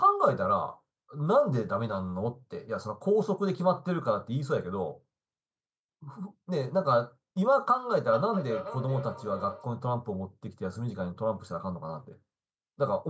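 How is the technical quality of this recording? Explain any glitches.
From 8.1 to 9.8 s, the speech returns about every 0.4 s, thinner and ringing, peaking about 10 dB below the voice. This is feedback echo between two devices: one device replays the other's microphone signal, which that microphone captures again, out of its own echo canceller's reach.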